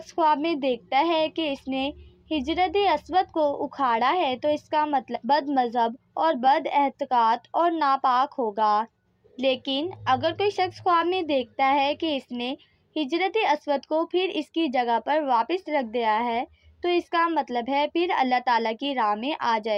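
At 5.15 s there is a skip ahead: roughly 0.7 s of audio vanishes, and the sound on either side is butted together with no silence and no concealment fill. A dropout would leave a hole or a muffled patch. Here the material simply lurches forward, because a queued stretch was discarded while later audio was already waiting, cutting the playout delay by about the same amount.

Right after, from 5.25 s to 6.47 s, a jitter buffer speed-up runs the audio at about 110% of normal rate. Many short pitch-period-sized slices were trimmed in quick succession, removing around 0.15 s in total to drain the excess backlog. The result sounds hurried, but the pitch stays where it was. That sets it apart from a resampling or clock-rate error, which would raise the pitch along with the tempo.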